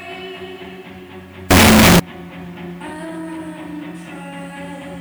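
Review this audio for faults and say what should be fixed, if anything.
A signed and unsigned mix-up occurs from 1.51 to 2.00 s. For that half second the sound turns into very loud, harsh distortion, and its quieter moments are as loud as the rest. The likely cause is 8-bit samples read with the wrong sign convention, which flips the top bit so that every zero crossing becomes a jump across the whole range. To prevent it, declare the sample format explicitly at every stage and check that the reader and writer agree on signed or unsigned.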